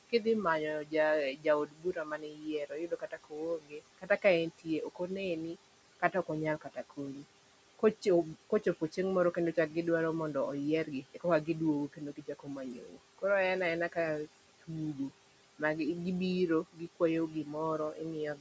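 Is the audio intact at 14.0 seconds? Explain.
No. At 14.0 seconds the clip carries noise suppressor artifacts, present throughout. The suppressor treats steady room noise as something to remove, cutting it by about 18 dB frame by frame. The noise sinks between words and swells under them.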